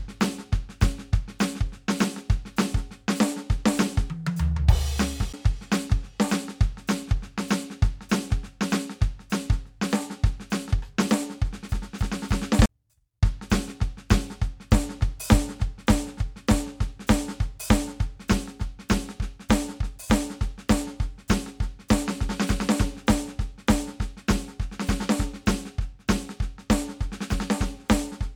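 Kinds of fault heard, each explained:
CD skip: the music briefly drops out and then carries on from a different spot, as if the laser got bumped onto another turn of the disc's spiral and the player picked up wherever it landed. You get it twice, once at 5.33 s with a tiny mute of around 10 ms, and again from 12.66 to 12.69 s with a gap closer to 40 ms. Each one lands as a short gap followed by an abrupt jump in the music.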